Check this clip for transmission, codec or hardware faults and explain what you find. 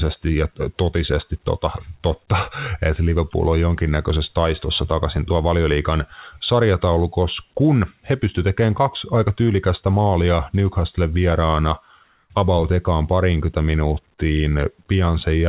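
One transmission fault stands out in this speech clip, heard through a call path whose band stops at 4 kHz, which fits narrowband G.711 telephony coding. From 12.04 to 12.30 s, just before "about ekaan parinkytä", the background is briefly swapped for comfort noise. The likely cause is discontinuous transmission: the sender paused during the lull and the receiver filled the 260 ms gap with synthetic noise shaped like the background. At the same level, about 45 dB below the loudest speech, the background's texture turns smooth and static. A spectrogram shows an even, featureless noise band there, and the waveform shows a flat, uniform floor.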